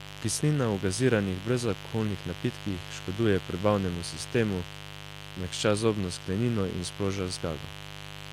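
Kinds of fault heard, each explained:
Mains buzz: Sharp switching spikes from the 50 Hz supply, entering twice per cycle, leak into the signal and spread into a dense series of 50 Hz harmonics. Here it runs under the speech for the whole clip as a steady, raspy buzz, sitting fairly high, roughly 15 dB below the speech.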